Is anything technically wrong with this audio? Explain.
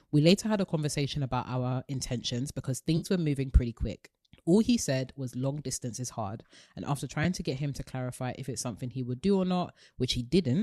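Yes. AAC frame loss with concealment occurs at 2.97 to 3.06 s, between "about our intentions because" and "were moving pretty quick", and again at 7.24 s, after "is hard and after". The decoder fills each gap from the last good spectrum, so these sound like brief smeared, phasey patches rather than silent dropouts or clicks. The first covers about 50 ms; the second is shorter, consistent with a single 10 ms frame. The faint graininess throughout is likely from low-delay AAC compression.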